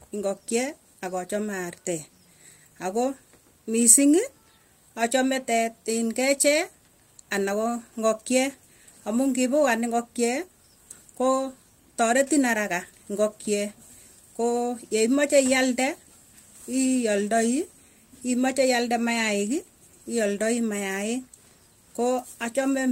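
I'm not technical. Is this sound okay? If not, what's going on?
Yes, this one's fine; nothing in the recording sounds broken or out of place, so there's nothing you need to worry about.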